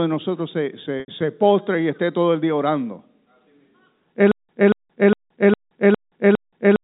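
Around 1.0 s, just after "de nosotros se", about 80 ms of data went missing, which fits four lost 20 ms packets. The receiver bridged the gap by repeating the last pitch period, so the sound holds briefly on a slightly buzzy tone before resuming at "se postre y esté": packet loss with pitch repetition.

From 4.32 s to the end, the stream likely stalled and, at each retry, replayed its last fragment before running dry. The result is a stutter with silent gaps: a 233 ms burst returns six times, every 407 ms, separated by about 174 ms of digital silence, and the audio that belonged there is lost. Throughout, the G.711 telephone band holds everything below 4 kHz.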